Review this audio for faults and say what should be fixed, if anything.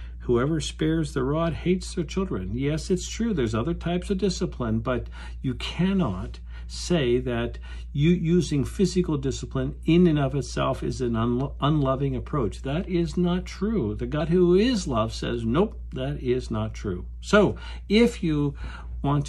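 At 14.17 to 14.21 s a short burst of damaged data in the compressed stream produces a brief glitch. The decoder misreads the corrupt frames, loses sync and resumes at the next valid frame header. On a spectrogram this appears as a brief vertical disturbance, and the waveform shows a jagged discontinuity. To prevent it, transfer and store the stream with checksums or error correction and keep metadata out of the audio payload.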